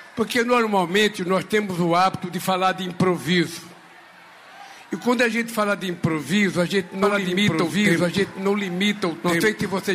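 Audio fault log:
7.03 s to the end, doubled audio track: a second full-band copy of the sound trails about one and a half seconds behind at roughly equal level, starting abruptly with no decay or room colour, likely from a slower second capture path or misaligned edit.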